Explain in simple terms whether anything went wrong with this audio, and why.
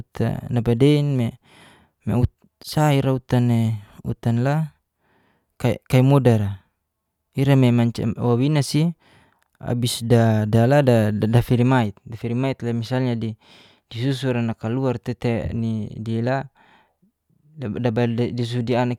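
Nothing went wrong here.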